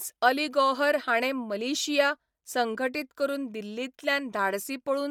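Speech throughout the clip carries plainly audible codec damage: a breathy, grainy edge where upper-band detail is replaced by noise, with nothing above 20.2 kHz. This is likely Bluetooth LC3 compression, and the texture fits about 48 kbps in 10 ms frames. Unlike a lowpassed SBC link, the band stays wide and the grain sounds noise-filled rather than metallic.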